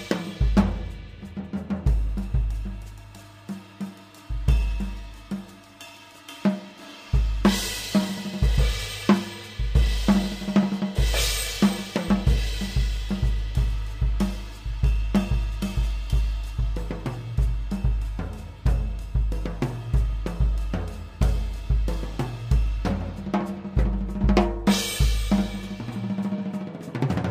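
Throughout, imaging from linear upsampling, which fits a 22 kHz source raised to 44.1 kHz by straight-line interpolation, dulls the top and leaves mirror images between 11 and 22 kHz, around 30 dB down, as metallic shimmer.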